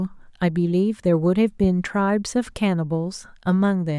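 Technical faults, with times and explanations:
1.64 to 1.67 s, loud pop: a single sharp pop lands on top of the speech and peaks at about 5 dB above the surrounding level. The speech carries on underneath without a break. The burst lasts only about 30 ms, which points to one sudden voltage step or pulse entering the signal path, likely from a plug, switch, static discharge or driver glitch. The circuitry after that point shaped the pulse into a short, hard-edged click.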